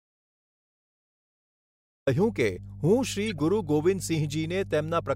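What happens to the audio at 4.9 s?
At 4.9 s you're hearing the same mains hum that runs under the whole recording. A steady low tone sits at 50 Hz along with a few low harmonics, and it stays clearly audible beneath the speech at roughly 15 dB down. It comes from power-line interference leaking into the signal path, most commonly through a ground loop or a transformer sitting close to the cabling. It doesn't start or change there; it's simply present at that moment too.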